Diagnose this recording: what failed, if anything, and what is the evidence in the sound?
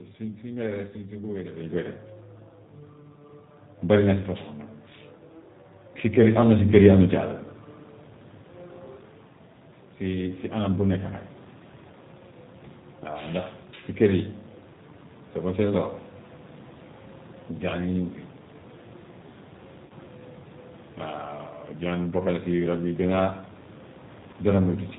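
Throughout the clip the speech is band-limited, with nothing above about 4 kHz, and has a rough, slightly synthetic texture, with the room noise warbling behind it. This is the G.729 codec at the codec stage. The damage is plainly audible and points to an 8 kbit/s G.729A encode. Each 10 ms frame is rebuilt from a vocal tract filter, a pitch estimate and a few pulses, so fine detail and noise come out buzzy and unstable.

At 19.86 s the speech briefly turns into a stretched sound that fades until 19.93 s. A shorter version of the same thing happens from 24.31 to 24.36 s. This is VoIP packet loss concealed by the speech codec, a network fault. About 40 ms and then 20 ms of audio went missing, which fits two lost 20 ms packets and then one. The decoder filled each gap by repeating its last pitch and filter at falling gain. Because every frame depends on the one before, the sound stays weak or distorted for a moment after real packets return.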